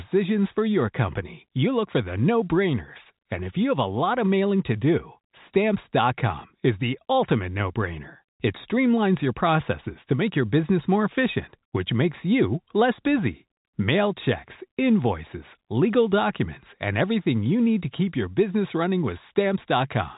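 Nothing stood out on listening to this speech recording, which carries the narrow telephone band of G.711 coding with nothing above 3.8 kHz.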